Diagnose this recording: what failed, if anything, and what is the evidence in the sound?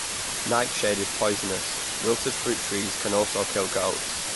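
Low bit depth with dither, at the sample-format conversion stage, runs through the whole clip. The speech has been requantised to 4 bits with dither added before rounding, so the rounding error becomes a steady, even white hiss rather than gritty distortion. Here that hiss sits at roughly the same level as the speech itself, so the speech is half-buried throughout. A spectrogram shows a flat, uniform noise floor filling every band below the cutoff from start to end. The waveform shows a thick, constant noise band even in pauses.

The second fault, low-bitrate audio saved at a high bitrate, lies at the codec stage. The spectrum has a hard ceiling, with nothing above 11.5 kHz, and the speech carries the artefacts of the first, low-bitrate encoding. That pattern is likely a 48 kbit/s MP3 later re-encoded as a 256 kbit/s MP3. The larger file cannot bring back the discarded detail. On a spectrogram it appears as a sharp horizontal cutoff at 11.5 kHz.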